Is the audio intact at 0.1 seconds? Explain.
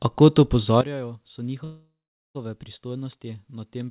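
Yes, the speech at 0.1 seconds is intact, carried through the call path with nothing above 4 kHz, as fits a narrowband G.711 mu-law link.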